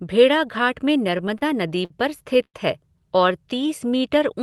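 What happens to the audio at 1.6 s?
At 1.6 s the speech is in a stretch of repeated stalls (stutter) from 1.07 to 1.92 s. The jitter buffer ran dry seven times, the longest for 52 ms, and the receiver extended the last sound. It drags and stutters, with frozen, smeared bands on a spectrogram.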